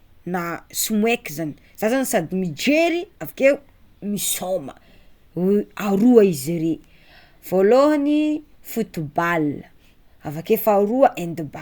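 No technical faults can be heard anywhere in the speech recording. There are no events to place in time, since no moment in the audio calls for comment.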